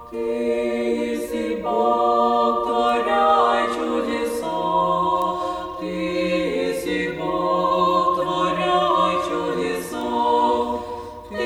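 Bit error spikes at 2.89, 5.22 and 10.01 s: each is a flipped bit in a single sample, jumping to about -19, -13 and -19 dBFS, heard as a sharp broadband tick.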